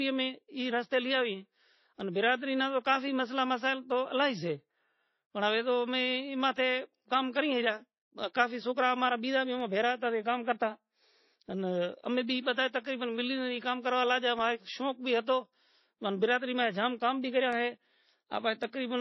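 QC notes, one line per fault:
Throughout: transcoding between lossy codecs. The speech sounds dull and band-limited, with nothing above about 6.7 kHz, and carries a layered smear of artefacts that don't belong to any single coder. This is likely a low-rate MP3 encode, around 24 kbit/s, re-encoded to AAC-LC near 32 kbit/s. The second coder spent bits reproducing the first one's damage and added its own, while the lowest cut-off in the chain survived.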